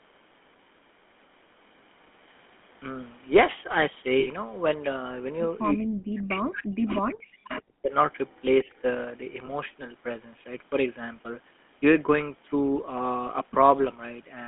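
Throughout, the sound carries the buzzy, gravelly roughness of the GSM full-rate codec, plainly audible and consistent with its 13 kbps rate. The band runs only from about 200 Hz to 3.5 kHz. Unlike a clean narrowband filter, which only dulls the sound, this codec adds a coarse grain, because its pulse-driven excitation keeps so little detail.

From 4.2 to 4.28 s comes a lost GSM frames event. The last good sound is held as a short metallic ring for 60 ms, which fits three missing 20 ms frames. A second, briefer one follows at 9.46 to 9.49 s, about one frame long. Unlike a dropout, the gap is filled with a frozen, ringing tone rather than silence.

Echo leak appears at 6.88 to 6.97 s, 7.56 to 7.62 s, 7.91 to 8.41 s and 8.71 to 8.81 s. Each is a copy of the sound arriving 333 ms late, fading from about 10 dB below the direct sound to around 40 dB below. It is likely loudspeaker pickup that an echo canceller failed to remove. 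The fixed delay separates it from room reverberation.

At 8.64 to 8.69 s, speech suppressed in double talk makes the level dip by about 10 dB for roughly 50 ms, likely because an echo canceller mistook overlapping talk for echo. It is a brief duck in loudness rather than a ring or a gap, which sets it apart from the lost frames.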